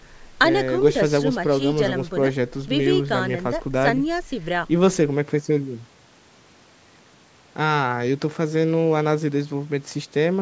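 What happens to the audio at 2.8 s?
Nothing goes wrong at 2.8 s: the speech continues intact through that moment, carried by the ordinary call microphone processing that trims the deepest bass and leaves nothing above 8 kHz.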